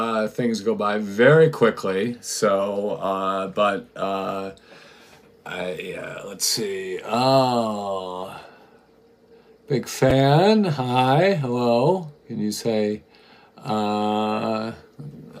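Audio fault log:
10.1 s chunks out of order: a block of audio about 5.33 ms long arrived one block late and played after the block meant to follow it. Nothing is lost, but the swap creates three hard joins, heard as a brief jumbled moment.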